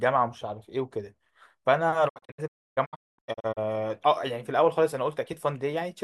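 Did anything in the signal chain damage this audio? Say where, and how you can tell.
Yes, a digital broadcast dropout at the reception stage, from 2.08 to 3.59 s. The receiver muted failed frames, leaving short silent holes totalling 0.93 s, the longest 0.29 s, each fading in 20 ms. Spectrogram and waveform show full-band blank gaps.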